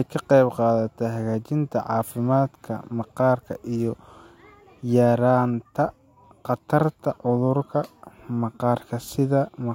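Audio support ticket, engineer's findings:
No fault found on listening to the speech clip. No dropout, distortion or timing artefact is audible, and nothing here points to a failing component.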